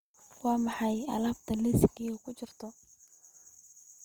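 Across the whole clip, the speech has a rough, grainy texture, with voiced sounds turning noisy rather than clean, and the damage is plainly audible. The top end is not cut short; content reaches about 20.1 kHz. This is Opus compression, likely in its music-oriented CELT mode at a rate that fits around 24 kbps. Short of bits, the encoder keeps each band's energy but fills in detail with folded or noise-like content, producing grain instead of hollow swirling.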